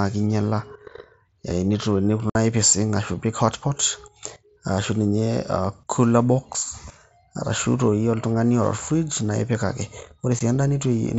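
Abrupt holes cut into the speech at 2.30 to 2.35 s (about 50 ms) and at 10.39 s: unconcealed Bluetooth headset packet loss, where dropped mSBC voice packets were replaced by silence or an idle pattern rather than filled in.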